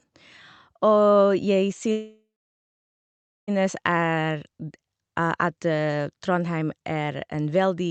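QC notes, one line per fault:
1.91 to 3.50 s, call audio freeze: the speech halts and its last sound carries on for about a third of a second as a fading buzz. About 1.2 s of silence follows, then the speech resumes exactly where it stopped, so roughly 1.6 s is inserted and nothing is lost. The likely cause is packets held up in transit, which let the jitter buffer run empty. Everything after the freeze plays about 1.6 s late.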